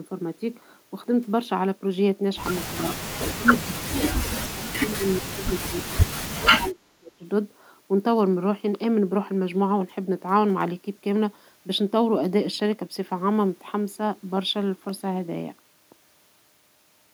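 In this speech clip the echo canceller likely failed to separate the talker from loudspeaker echo during double talk and turned both down. Speech is suppressed in double talk: a slight dip of about 5 dB at 2.79–2.92 s, then deep drops of roughly 35 dB across 3.35–7.25 s.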